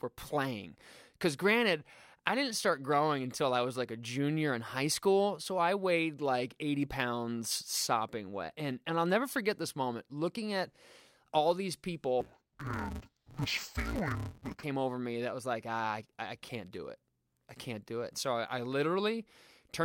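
From 12.21 to 14.63 s, between "all these" and "over me that was", interleaved audio is read as planar: 5.8 ms blocks split wrongly into channels, leaving the speech dull and robotic with a 172 Hz buzz. Unlike a sample-rate error, the pace and pitch hold steady.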